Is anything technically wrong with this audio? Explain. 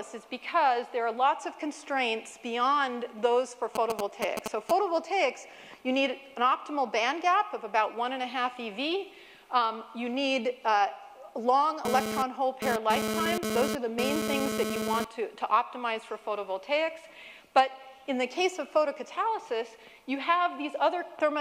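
Yes, a nearby 2G phone is interfering twice. From 3.75 to 4.71 s, a galloping dit-dit-dit of short 217 Hz buzzes, roughly as loud as the sound itself: GSM signalling bursts, rectified by the audio circuit. From 11.85 to 15.05 s, a hard, raspy 217 Hz buzz, rich in harmonics and about 2 dB below the sound, cuts in and out: GSM phone buzz from a data transfer.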